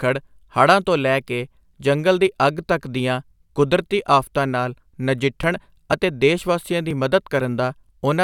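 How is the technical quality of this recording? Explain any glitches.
The recording has one glitch: periodic USB or driver dropouts. From 5.43 to 7.89 s, about 10 ms of speech is skipped every 0.49 s, roughly seven times, causing regular ticks.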